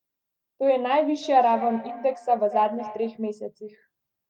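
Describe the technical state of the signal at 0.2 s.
At 0.2 s the speech signal is intact, with no audible fault at that moment.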